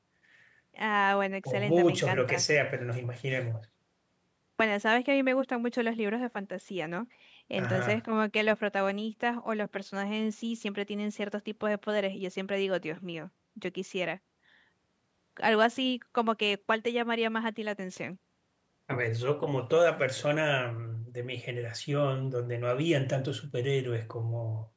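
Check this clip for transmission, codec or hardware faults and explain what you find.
No transmission, codec or hardware faults turn up in this clip; the call microphone processing is working as expected, with its high-pass filter trimming the lowest bass and nothing present above 8 kHz.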